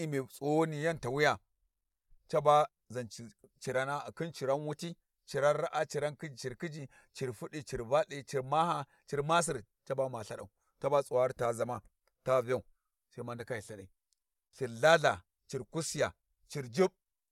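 A speech recording with nothing technically wrong in it. No fault of any kind can be heard at any point in the clip.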